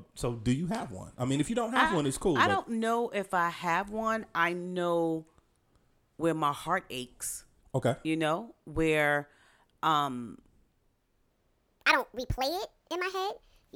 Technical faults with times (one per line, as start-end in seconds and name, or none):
11.30-13.76 section at the wrong speed